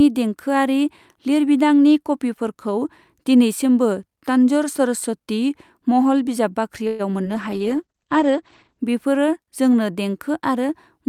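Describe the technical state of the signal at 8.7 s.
At 8.7 s a call bitrate drop is under way, from 7.32 to 8.87 s. Encoding falls from 64 to 11 kbps, cutting highs above 8 kHz. Speech sounds muffled and rough.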